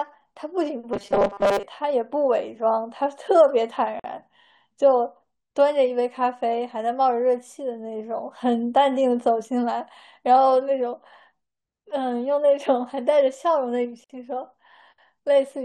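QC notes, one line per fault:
0.93–1.63 s, robotic sound from repeated short buffers: the audio turns into a rigid, metallic buzz at a fixed 200 Hz that still tracks the speech contour only loosely. The likely cause is fresh audio arriving too rarely, so playback keeps looping the last short slice instead of advancing. A 200 Hz buzz fits a slice about 5 ms long. Roughly two thirds or more of this stretch is repeated material, with the real audio skipped.
4.00 s and 14.04–14.10 s, gap at a join of encoded pieces: separately encoded segments were spliced without removing each run's start-up delay and end padding, so a hole of silence opens in continuous speech, about 48 ms at 4.00 s and about 54 ms at 14.04 s. The edges are smeared by the codec, and the sound resumes where it stopped. The 10 s spacing points to 10-second encoded chunks.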